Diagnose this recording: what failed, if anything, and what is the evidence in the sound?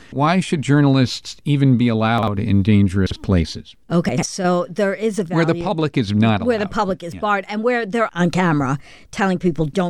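The speech has chunks out of order, a buffer-stage failure at 2.18–2.28 s, 3.07–3.16 s and 4.09–4.23 s. Each event is a brief jumble. A 46 ms block, consistent with a 2048-sample buffer at 44.1 kHz, plays one chunk late at the first two times and two chunks late at the third, so nothing is lost but the order is wrong. On the waveform and spectrogram, three abrupt discontinuities bracket each displaced block.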